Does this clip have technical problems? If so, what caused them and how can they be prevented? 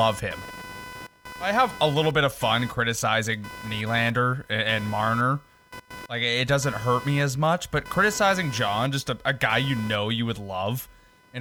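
Yes. Computer activity noise runs through the whole clip: a buzzing, chirping layer that pulses at around 500 Hz and sits roughly 20 dB below the speech, rising and falling with what the computer is doing rather than with the talking. It happens because shifting load from the processor, graphics card or mouse disturbs the ground shared with the audio circuitry, and that fluctuation leaks into the signal. To prevent it, use an external, isolated audio interface or a ground-loop isolator so the recording path is kept apart from the computer's noisy ground.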